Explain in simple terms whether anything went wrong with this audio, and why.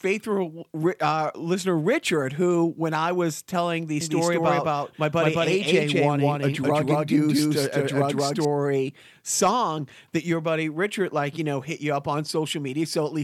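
Something did go wrong. From 4.01 to 8.45 seconds, just after "I was telling the", the speech is heard twice: a second copy runs about a fifth of a second behind the first, and it's roughly as loud. This is a doubled audio track, likely caused by the same sound being recorded again through a slower path. Unlike a room echo, the copy doesn't fade away or sound distant. It's a clean duplicate that switches on and off abruptly.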